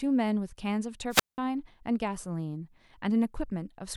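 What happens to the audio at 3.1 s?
Nothing goes wrong at 3.1 s; the speech carries on intact through that moment.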